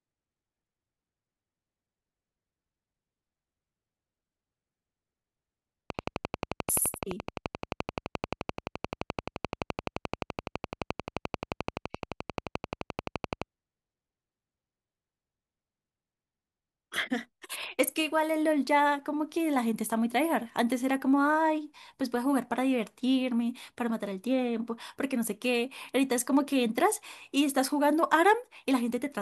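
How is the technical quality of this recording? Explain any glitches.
The recording is marred by one clear fault. A train of clicks runs from 5.90 to 13.43 s: roughly a hundred near-identical pulses at a steady 11.6 per second, well above the speech and continuing through its pauses, likely interference from nearby equipment or a faulty connection or power supply.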